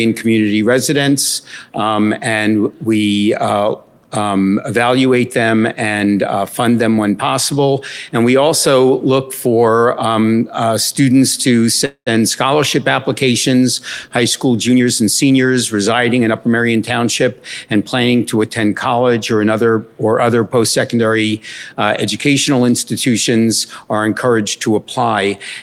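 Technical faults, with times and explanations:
11.85–12.14 s, call audio freeze: the sound is stretched into a fading buzz or hiss for about 211 ms, with about 90 ms of silence, and then resumes where it stopped. Nothing is lost; the gap likely comes from delayed packets leaving the jitter buffer empty.
14.71–16.99 s, jitter buffer speed-up: playback runs at about 109% speed with unchanged pitch, sounding hurried. The receiver cut many short pitch-period slices, about a fifth of a second in total, to drain the backlog.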